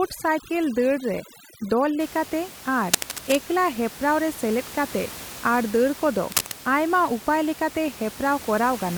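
It's a speech clip, and for the first 2 seconds there's overdone noise removal: the background drops and breaks up into twinkling specks, and quiet parts of the voice get gated away with it. Then there are two bursts of scratchy, rustling noise, nearly as loud as the speech, from 2.86 to 3.37 s and from 6.32 to 6.59 s. That's likely cable scratch noise from a worn cable or connector being moved. After the processing lets go, the room noise sits about 17 dB under the speech.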